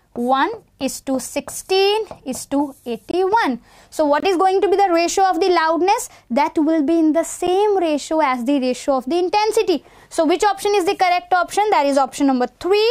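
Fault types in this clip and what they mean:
Block of digital silence: three abrupt cutouts, two short holes of about 23 ms, one tick-like dip of about 9 ms, where the sound dropped to silence, likely from output buffers left unfilled.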